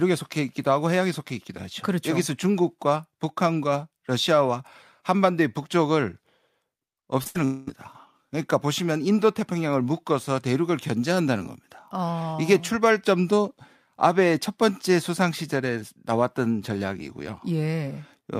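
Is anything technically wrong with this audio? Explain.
Yes, there is a cluster of network-related faults just after 7.2 s.

From 7.23 to 7.27 s there is short concealed packet loss. About 20 ms never arrived and the receiver extended the preceding sound, leaving a brief smear that shows as a blurred sliver in the spectrogram.

From 7.27 to 7.37 s a burst of packet loss follows. About 80 ms is missing and is bridged by a held, fading continuation. The waveform shows a decaying envelope, and the spectrogram shows a frozen, static stretch before the audio resumes further on.

From 7.45 to 7.69 s, about 220 ms of sound is replaced by a sustained continuation that fades without ever reaching true silence. This points to a likely long network dropout. The spectrogram shows smooth, static bands where varying detail should be.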